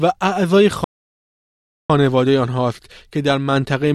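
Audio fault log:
0.84–1.90 s, playback stall: the speech halts mid-flow and the output drops to silence for about 1.05 s before the audio resumes. The gap is silence rather than a fade, and it is far too long to be a click or dropout. The likely cause is the player running short of buffered data, or its audio thread being blocked, so nothing reached the output until it caught up.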